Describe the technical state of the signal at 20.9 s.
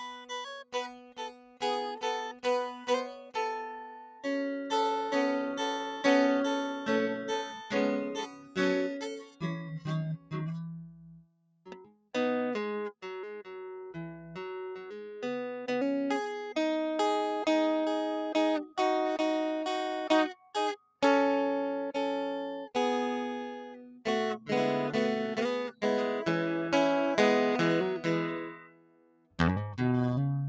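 At 20.9 s the music sinks and its decay is clipped short. Between 20.77 and 21.02 s the sound is cut by the noise suppressor, which reads this material as noise and pulls it down by about 17 dB at its deepest.

That dip sits inside a wider problem. A speech-oriented noise suppressor is applied to the music throughout, so held tones and tails keep being pushed down while attacks pass. The level swings by roughly 15 dB, giving a pumping, fluttering, thinned character.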